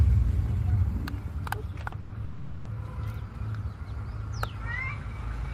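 A packet arrived late at 1.87 s, the jitter buffer ran dry, and the receiver held the last bit of sound for about 50 ms until it showed up. This short stall from a late packet lasts to 1.94 s. It sounds like a brief held sound with a slight buzz or dip, and then the audio resumes from the same point. Nothing is lost, but everything after it now runs 50 ms later than before. Two call audio freezes follow, most likely caused by packets being held up in transit and the buffer emptying again. The first runs from 2.00 to 2.12 s and the second from 2.24 to 2.67 s. In each, the final sound is drawn out into a fading buzz or hiss that never drops to full silence, lasting about 100 ms and then 410 ms. Afterward the audio picks up exactly where it stopped, so no content is missing. Instead, gaps have been inserted, pushing the rest of the audio about 100 ms and then 410 ms further behind.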